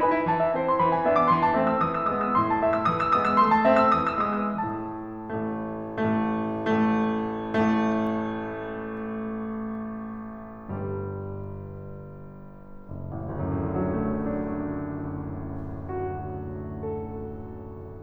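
Nothing in this music stood out as a technical problem on listening.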